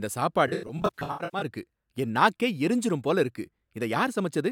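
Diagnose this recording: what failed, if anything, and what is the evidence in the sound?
AAC frame loss with concealment, 0.47 to 1.46 s, codec over network, ending before "இருக்கு என் நாக்கே எரிஞ்சிரும்". About 512 ms of frames vanished across nearly a second, in runs up to around 100 ms. The decoder rebuilt each gap from the last good spectrum, leaving smeared, phasey patches.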